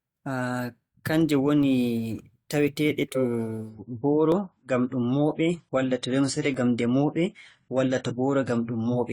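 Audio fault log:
3.70 s to the end: adaptive stream at a lower bitrate. The speech suddenly picks up more codec artefacts, with no gap at the switch. That fits the player falling back from roughly 96 to 24 kbit/s AAC when the connection slowed.
4.32, 6.54 and 7.59 s: dropped samples. You get three single sharp clicks, each a thin vertical line on the spectrogram, with no sound audibly missing. They're likely from a fraction of a millisecond of samples going missing, so the waveform jumps straight to a later value.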